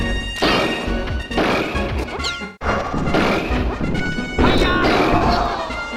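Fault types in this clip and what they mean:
AAC frame loss with concealment: chunks of the AAC stream went missing and the decoder covered each gap by reusing the last good spectrum with scrambled phase or interpolated energy. It shows as a smeared, noisy patch from 2.44 to 2.68 s, with about 170 ms of audio lost, which fits roughly eight lost frames. A shorter patch at 5.17 to 5.22 s covers about 43 ms of lost audio, consistent with two lost frames.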